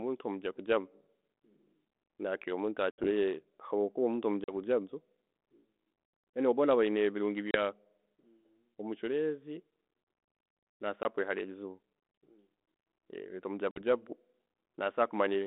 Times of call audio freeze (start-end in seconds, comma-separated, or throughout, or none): none